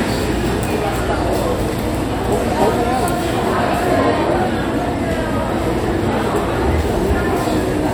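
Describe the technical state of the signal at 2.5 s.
At 2.5 s the signal is intact, with no fault audible at that moment.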